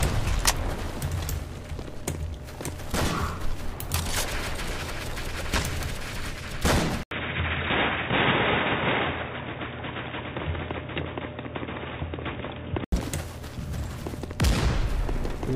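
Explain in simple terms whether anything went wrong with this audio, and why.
Something slipped partway through. At 7.03 s there's a tiny 80 ms gap, then the sound turns dull and boxy, with nothing above 3.8 kHz and a faint new background noise, at the same loudness, until it clears at 12.92 s. Likely cause: the input switched to a poorer device.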